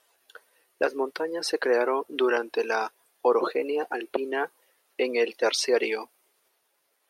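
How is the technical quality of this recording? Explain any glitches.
No glitches to explain: nothing in the recording registers as a technical fault.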